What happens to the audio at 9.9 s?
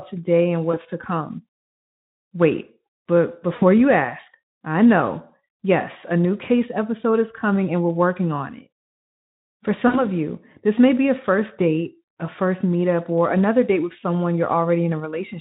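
VoIP packet loss concealed by the speech codec occurs from 9.87 to 10.04 s. About 60 ms of the stream went missing, which points to three consecutive 20 ms frames. The Speex decoder, which at 15 kbps adds only light damage elsewhere, filled the gap by extending its last pitch and spectral shape at steadily lower gain. The speech smears into a buzzy tone or coloured noise that fades, and because each rebuilt frame feeds the next, the voice stays weak or distorted for tens of milliseconds or more after about 10.04 s.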